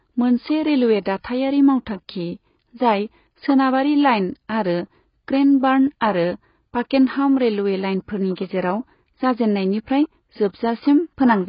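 From start to finish the speech is band-limited, with nothing above about 5.1 kHz, and sounds dull and smeared, with a warbling, fizzy texture on sustained sounds and sibilants. This is likely heavy AAC compression, with damage that fits AAC-LC at roughly 16 kbps.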